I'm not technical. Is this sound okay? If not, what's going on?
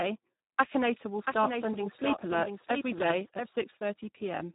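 No. The whole clip has heavy Speex codec damage: the speech sounds hoarse, buzzy and a bit robotic, and everything above about 3.8 kHz is gone, so it's muffled.

From 1.26 to 3.48 s there's a doubled audio track: a slightly quieter copy of the speech runs about 0.7 s behind, probably a second, slower recording path mixed in.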